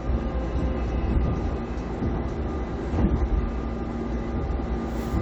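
No technical faults can be heard anywhere in this recording.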